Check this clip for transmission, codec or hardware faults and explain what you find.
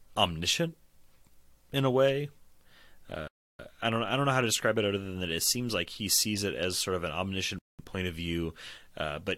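Two rebuffering stalls interrupt this speech clip. The first runs from 3.28 to 3.59 s, just before "I don't I don't", and the second from 7.59 to 7.79 s, between "as sort of an" and "point of". In each, the player exhausted its downloaded audio and paused until more arrived. The sound drops to silence, then picks up exactly where it stopped with nothing missing, adding about 0.32 s and 0.2 s of dead air.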